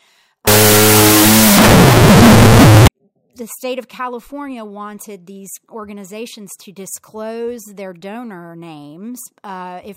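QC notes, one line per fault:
0.47–2.88 s, wrong sample width: the 16-bit samples are read as unsigned 8-bit, so every byte becomes its own sample. Half of those are the low bytes, which are noise-like, and only the high bytes follow the signal. Even those are shifted by the signed-to-unsigned offset. The speech sits buried under loud hiss. Doubling the sample count plays it at half speed, an octave low, until "the state of".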